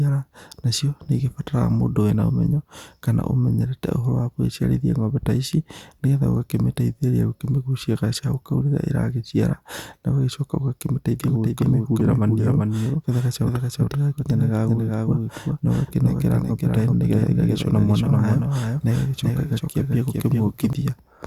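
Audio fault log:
11.19–20.73 s: doubled audio track, a second copy of the speech trails about 400 ms behind at roughly 5 dB down, likely a slower capture path or misaligned edit.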